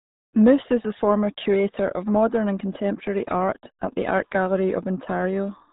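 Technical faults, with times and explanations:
Throughout, RealAudio 14.4 codec: the speech comes out muffled and gargly, with nothing above 3.8 kHz. That heavy damage fits an 8 kbit/s dial-up stream.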